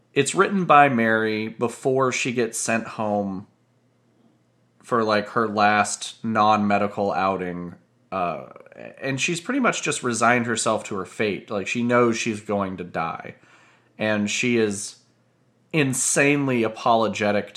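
From about 7.19 to 8.69 s, just before "and she's pretty much", sample clock jitter smears timing by under half a microsecond, adding faint hiss roughly 55 dB down on louder, brighter bits.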